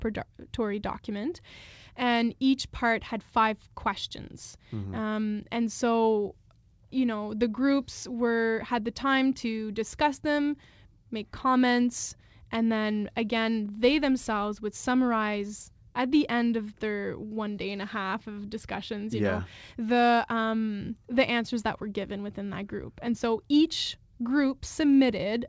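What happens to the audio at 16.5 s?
Nothing goes wrong at 16.5 s: the speech carries on intact through the call path, with its band topping out around 8 kHz as G.722 coding leaves it.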